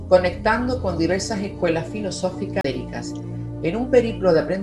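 At 2.61 to 2.64 s, a CD skip: the laser jumps to another turn of the spiral, so playback mutes for about 30 ms and resumes from a different point.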